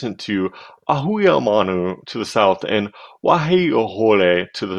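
No technical faults detected.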